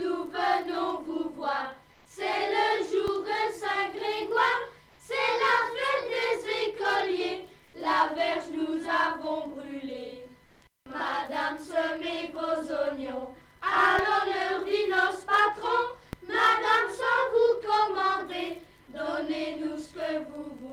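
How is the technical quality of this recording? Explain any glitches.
The recording has two kinds of glitch: brief patches where the background turns synthetic, and two shifts of the waveform's zero line.

Comfort noise in place of the background appears four times: 1.93–2.05 s (120 ms), 4.89–4.99 s (100 ms), 7.65–7.73 s (80 ms) and 10.45–10.61 s (160 ms). The background sits about 35 dB below the loud passages. In each pause its natural texture gives way to a smooth, featureless hiss. The hiss sits about 2 dB higher in the first two patches, about 1 dB lower in the third, and at the same level in the fourth. This likely comes from Opus discontinuous transmission, in which the receiver synthesises noise while the sender stays quiet. Unlike a noise gate, the pauses never drop to silence.

A DC step shifts the zero line at 3.08 s, holds until it returns at 13.99 s, and shifts again at 16.13 s, staying offset to the end. 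Each step sounds like a low thump. Unlike a dropout or a digital click, the audio itself runs on unbroken.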